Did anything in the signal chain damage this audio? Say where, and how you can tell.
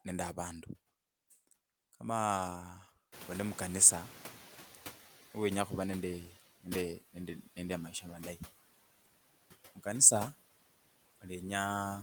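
Yes. The noise suppressor in the call processing is cutting every band it treats as steady noise by about 15 dB for the whole clip. The background drops away between phrases and swells back under the speech.

The same suppressor falls behind when the room noise jumps by about 22 dB near 3 s. From 3.12 to 5.23 s it is catching up: at first the noise is reduced by only about 9 dB, then it sinks over 2.11 s as the noise estimate adapts.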